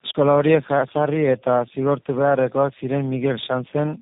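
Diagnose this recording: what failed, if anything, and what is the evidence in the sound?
Throughout the speech the sound is rough, muffled and warbly, with nothing above about 3.8 kHz. This is tandem speech coding at the codec stage: repeated decode and re-encode passes, which fits a low-rate coder such as G.729A, each degrading already degraded output.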